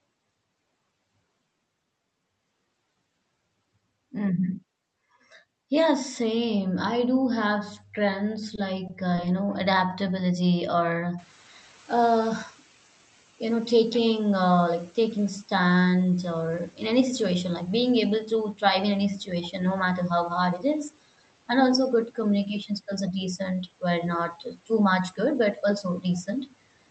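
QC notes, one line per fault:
8.55 s, 8.87 s and 9.15 s, short stall from a late packet: three brief holds, just after "I do have strengths" and before "uh you know adaptability". Each time a packet arrived late and the jitter buffer ran dry, so the receiver stretched the last sound by about 20 ms, giving a faint buzzy sustain or dip. Playback then resumed from the same point, so nothing is lost, but the delay grows by 20 ms per stall.
11.18 to 15.36 s, noise suppressor catching up: after "uh you know adaptability", the room noise jumps by about 18 dB around 11 s. The suppressor's noise estimate is still tuned to the quieter room, so the new noise first comes through with less reduction. Over about 4.2 s the estimate adapts and the noise sinks by about 8 dB, which is heard as the noise settling lower beneath the speech.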